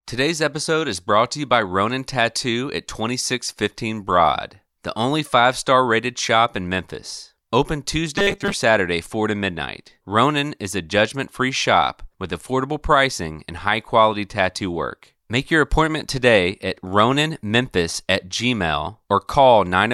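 From 8.16 to 8.54 s the speech becomes a rigid, metallic 200 Hz buzz: robotic sound likely from repeated short buffers, a 5 ms chunk looped over most of the audio.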